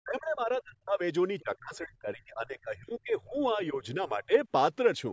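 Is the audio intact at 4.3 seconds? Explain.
No. 4.3 s falls inside a stretch from 1.4 to 4.33 s where the speech dips and drops out in pieces, by roughly 30 dB at worst. This is likely speech suppressed in double talk: the echo canceller, unable to separate talker from loudspeaker echo, turned both down.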